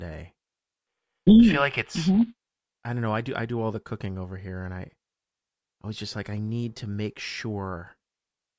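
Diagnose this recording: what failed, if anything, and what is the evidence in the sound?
Nothing in the signal chain has failed, and the speech reaches the listener intact at every stage from capture through playback.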